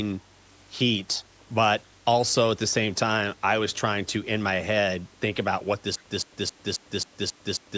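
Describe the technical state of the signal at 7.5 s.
Stutter with silent gaps, from 5.96 s to the end: a 167 ms burst repeats every 269 ms with about 102 ms of silence, likely from a stalled stream replaying its last fragment.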